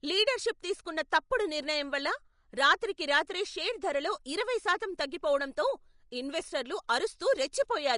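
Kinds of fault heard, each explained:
Vorbis compression: The whole clip has that grainy, hissy texture you get when a codec is starved of bits, and it's very likely Vorbis doing it. Nothing reaches above 10.6 kHz, so the top end is simply gone, and what treble remains has been quantised so coarsely that fine detail turns into noise. The speech sounds roughened and its consonants lose their edges. The damage is plainly audible, which fits a low bitrate of around 37 kbps.
pre-echo: Near the very end, at about 7.52 s, a sharp onset in the speech gets a smear of hiss just ahead of it, spread over roughly 13 ms. The codec spreads its quantisation noise across an entire transform block, so when a loud attack lands late in the block, noise sized for that attack also fills the quiet stretch before it. The attack comes out softened and blurred instead of crisp.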